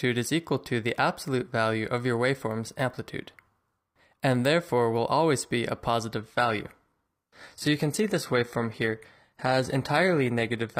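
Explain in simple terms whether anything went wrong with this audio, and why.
Something does go wrong, from about 6.18 s to the end. This is an adaptive stream at a lower bitrate. The stream switched to a lower-quality version, likely because the connection slowed down. There is no gap or pause. The quality just drops suddenly. After the switch, the sound carries more compression artefacts. The highest treble is cut off, with nothing above about 14.9 kHz.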